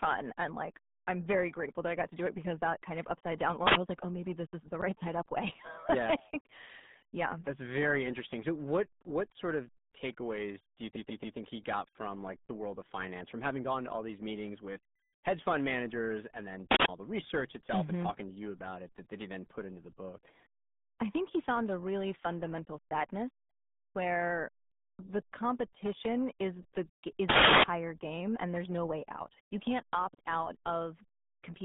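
Throughout, the RealAudio 14.4 codec muffles the speech into a gargly 150 Hz to 3.6 kHz band with nothing above 3.8 kHz; its heavy damage, unlike plain telephone filtering, fits an 8 kbit/s stream.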